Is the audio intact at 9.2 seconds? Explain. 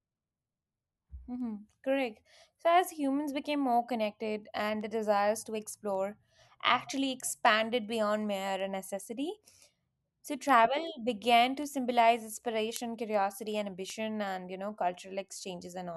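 No. At 9.2 seconds the speech sits inside a run of word clock ticks lasting from 0.27 to 15.79 s. An unlocked receiving clock drifting by roughly 70 ppm drops or repeats one sample about every 0.4 s, giving sharp ticks. Their steady rhythm distinguishes them from random clicks.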